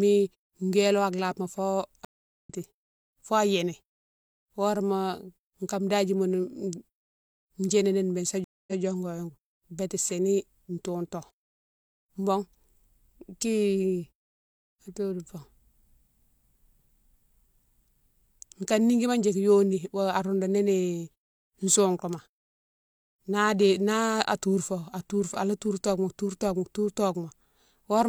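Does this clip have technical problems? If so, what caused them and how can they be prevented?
Yes. Stream reconnects occur at 2.05–2.50 s and at 8.44–8.81 s, just after "béne sa". Each time the connection dropped and the player restarted its decoder mid-stream. The first gap is 405 ms of silence and skips roughly 0.2 s of speech. The second is 231 ms and repeats about 0.14 s. A larger client buffer with seamless resumption from the exact byte offset would prevent this.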